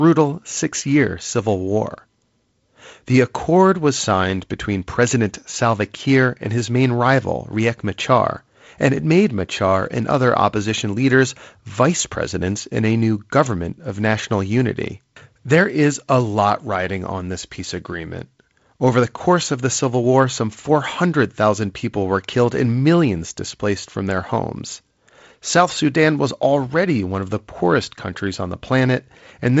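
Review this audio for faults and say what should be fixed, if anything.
No faults; nothing needs fixing.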